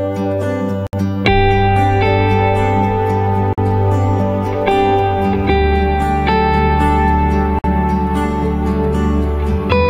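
The audio has three gaps at joins of encoded pieces: short dropouts to silence at 0.87 s (63 ms), 3.53 s (49 ms) and 7.59 s (53 ms), each with smeared edges, after which the sound resumes exactly where it stopped. This is the signature of separately encoded segments butted together untrimmed, so each join carries the encoder's start-up delay and the padded final frame of the previous piece.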